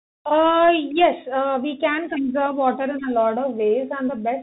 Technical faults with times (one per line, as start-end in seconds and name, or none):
0.00-4.42 Bluetooth CVSD headset codec